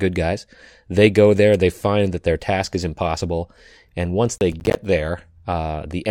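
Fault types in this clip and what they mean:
Processor overload crackle: The processor falls behind and misses a run of buffer deadlines. Each miss drops a short slice of silence with hard edges. From 4.38 to 4.76 s the speech turns gritty and torn, with about ten gaps around 10 ms long.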